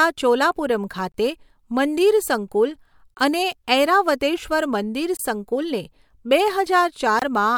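Gap between chunks at 1.12, 3.14 (just after "મંદિર સંકુલ"), 5.17 and 7.19 s: 25 ms silences every 2 s, where joins in the chunked audio were left unfilled. Unlike dropouts, nothing is lost; the speech resumes intact after each hole, at a strictly regular spacing.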